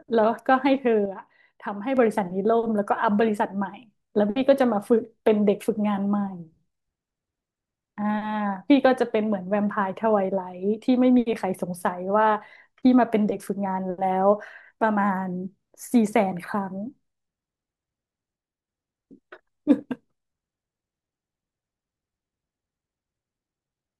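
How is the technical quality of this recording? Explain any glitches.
There's one glitch to flag. From 1.05 to 1.97 s the speech abruptly dips by about 6 dB, then snaps back to full level. That's likely one channel dropping out. When the stereo is summed to mono, the content common to both sides loses half its contribution, and anything present only in the missing channel disappears for that stretch.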